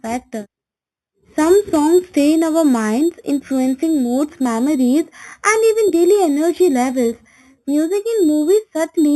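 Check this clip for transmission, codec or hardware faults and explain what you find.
A single fault runs through the whole clip. A bright, metallic fizz sits on top of the speech and rises and falls with it. It is strongest between 4 kHz and 8 kHz, at about 20 dB below the speech. This is imaging from sample-and-hold upsampling. The audio was raised from 8 kHz to 48 kHz by repeating each sample with no smoothing, which leaves mirrored copies of the spectrum above the original band.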